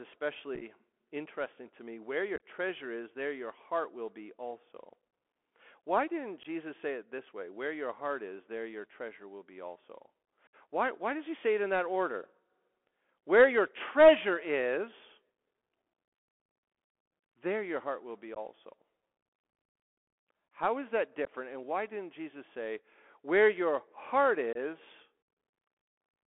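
From start to finish the speech sounds thin and boxed in, confined to roughly 250 Hz to 3.4 kHz, with scratchy s sounds, harsh distortion on loud bright syllables and a granular hiss beneath everything. This is the Bluetooth CVSD headset codec. Its one-bit delta coding, which fits a 64 kbps link, tracks the waveform with an adaptive step that cannot keep pace with fast, loud high-frequency movement.

Over this, short abrupt holes break up the speech, each a case of unconcealed Bluetooth headset packet loss. At 0.55 to 0.63 s, about 30 ms drops out in several gaps spread over 60 ms, which gives a brief crackle. At 2.36 to 2.44 s, about 37.5 ms goes missing, including one 22.5 ms gap. Further dropouts follow at 6.43 to 6.46 s (15 ms), 10.47 to 10.55 s (60 ms), 18.35 to 18.38 s (15 ms), 21.25 to 21.31 s (15 ms) and 24.53 to 24.58 s (22.5 ms). In each, lost headset packets were replaced by silence or an idle pattern, and nothing was done to mask the gaps.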